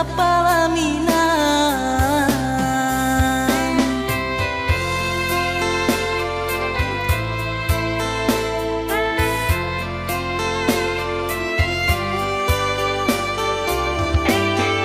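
No technical faults are audible anywhere in the recording.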